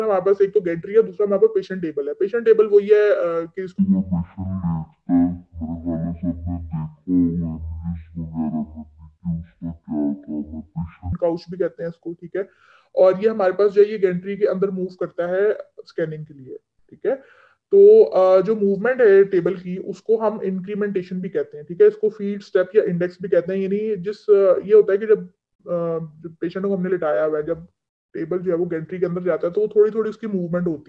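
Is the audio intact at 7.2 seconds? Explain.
No. At 7.2 seconds the sound plays at half speed and a full octave low, slow and deep, within a span from 3.78 to 11.13 seconds. This is a wrong sample rate fault: the samples are clocked out at about half their original rate without conversion, which fits 44.1 kHz audio played back near 22 kHz, so speed and pitch drop together.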